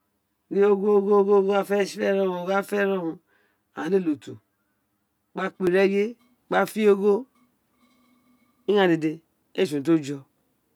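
From 0.0 to 5.67 s the speech has channel delay (comb filtering): one channel arrives around 10 ms late, and summing to mono cancels evenly spaced frequencies from about 50 Hz upward. It sounds hollow and phasey, and unlike flanging, the notches stay fixed rather than sweeping.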